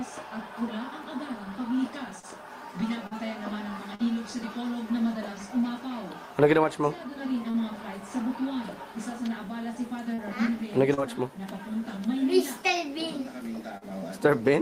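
At 1.03 s there is a repeated buffer: fresh audio did not reach the output in time, so the device played its last block once more. The repeated slice is about 5 ms long, which points to a very small buffer, so it registers as a click or brief buzz rather than an audible stutter. Unlike concealment, the repeat is an exact copy joined with hard edges and no blending.

Short concealed packet loss then occurs seven times, at 2.19, 3.07, 3.95, 7.51, 10.14, 10.94 and 13.77 s. Each time, 40 ms of the stream failed to arrive, and the receiver filled the gap by extending the preceding sound for roughly 31 to 42 ms before fading back into the real signal. Each one sounds like a brief smear or wobble. The filler is newly synthesized and eased back in, which separates it from the hard-edged repeat.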